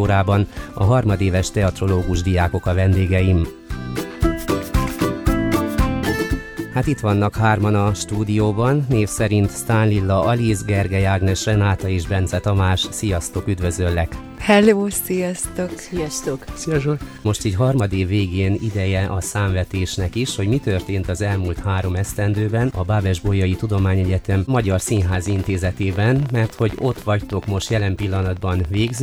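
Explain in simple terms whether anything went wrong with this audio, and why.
From 24.72 s to the end, at 29.00 s, a train of clicks runs over the audio: about 70 sharp ticks, roughly 19 each second at an uneven pace, some about as loud as the sound itself. Unlike a single pop or random crackle, these clicks keep the same shape and keep coming, which points to something repeatedly injecting a pulse, likely electrical interference from nearby equipment or a faulty connection or power supply.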